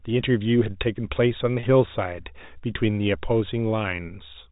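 At 1.6 s, packet loss with pitch repetition: about 30 ms of audio went missing in transit, which fits three 10 ms packets, and the receiver filled the hole by repeating the last pitch period until the speech resumed at 1.63 s. Because the gap is so short, it comes across as a brief held, slightly buzzy tone inside the speech rather than a dropout, with the 4 kHz-limited sound of the G.711 telephone coding continuing on either side.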